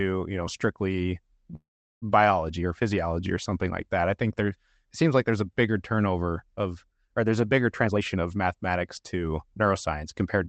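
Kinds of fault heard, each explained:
Call audio freeze: From 1.55 to 2.04 s the speech stalls. The last sound trails off briefly, then there is about 380 ms of silence, and the audio resumes exactly where it stopped with nothing lost. The likely cause is packets held up in transit, so the jitter buffer ran dry and the receiver filled 464 ms on its own. That gap pushes everything after it 464 ms later.
Jitter buffer speed-up: From 7.83 to 10.37 s the speech sounds hurried, running at about 114% of normal speed while its pitch stays unchanged. The buffer was holding more audio than it aims for, so the receiver shortened it by repeatedly cutting out tiny slices, each one or a few pitch periods long. In total it removed around 0.4 s to bring the delay back down.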